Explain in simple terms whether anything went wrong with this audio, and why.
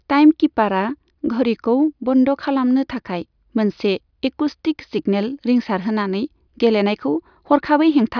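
Nothing went wrong here: the speech just plays through, with no technical trouble anywhere you'd need to worry about.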